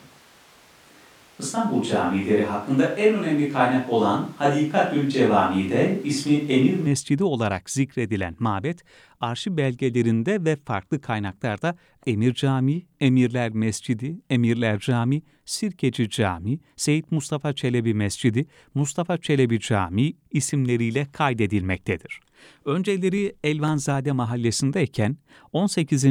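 The close microphone's signal was likely missing, leaving a distant microphone in use from the very start until 6.87 s, just before "olarak zikredilen mabet arşiv". The speech sounds roomy, hollow and thin in the bass, with the level about the same but room noise around 30 dB below.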